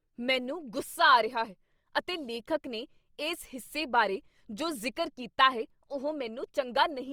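Speech, with plainly audible Opus compression damage running through all of it. The bandwidth stays wide, reaching about 20.2 kHz, but the speech sounds grainy and rough, which fits a low rate around 24 kbps in Opus's CELT music mode as the likely cause.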